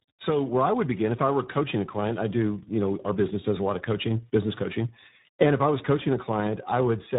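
Speech throughout shows tandem speech coding: two successive low-rate speech codecs, which points to G.726 followed by iLBC, leave rough, muffled, warbly audio with nothing above 3.8 kHz.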